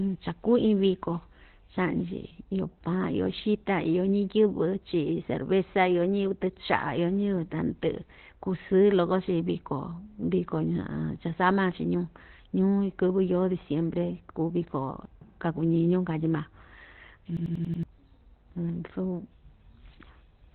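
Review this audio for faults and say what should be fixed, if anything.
The speech is muffled and hoarse throughout, with nothing above 4.2 kHz. This is likely Opus compression at a very low rate: the encoder has dropped into its narrowband SILK speech mode, discarding the upper spectrum and modelling the voice coarsely. The heavy damage fits a bitrate around 12 kbps. To prevent it, encode at a higher bitrate so Opus stays in wideband or fullband mode.

From 17.37 s to 17.83 s there is a system hang loop. One 92.88 ms slice of audio repeats exactly, five times, at about 10.8 Hz, giving a machine-gun stutter. The host or driver stopped delivering new data while the playback hardware kept cycling through its ring buffer. The loop length fits a 4096-sample buffer, and roughly half a second of real audio is lost. To prevent it, find the stall in the audio thread or driver and fix it, and have the device output silence rather than stale buffer contents when it runs dry.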